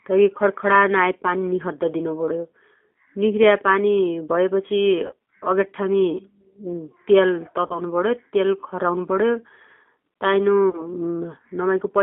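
The whole clip passes through the G.729 codec at 8 kbit/s, which rebuilds the speech from a vocal tract filter, a pitch predictor and a few pulses per frame. The band runs only from 250 Hz to 3.6 kHz, and the speech sounds plainly rough and synthetic.

At 5.07–5.13 s, 7.67–7.82 s and 10.70–10.84 s, VoIP packet loss concealed by the speech codec fills about 30 ms of missing audio each time, which fits a single lost packet. The decoder stretches its last frame into a fading buzzy tone or coloured noise, and the sound stays weak or distorted briefly after each gap.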